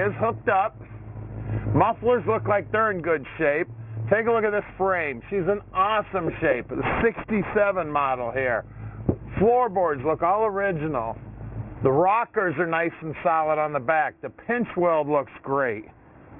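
Aliasing runs through the whole clip. The audio appears to have been brought down to a rate near 6 kHz with no filter first, so everything above 3 kHz folds back as unrelated tones, sitting roughly 15 dB under the sound and giving it a gritty, metallic edge.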